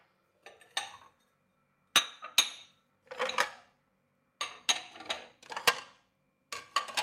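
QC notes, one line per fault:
Nothing stood out on listening to this recording of sounds.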